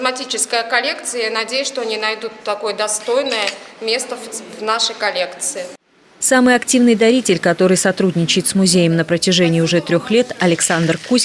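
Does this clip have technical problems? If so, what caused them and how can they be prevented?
No, nothing in this one points to a technical problem, so there's nothing to trace back or guard against here.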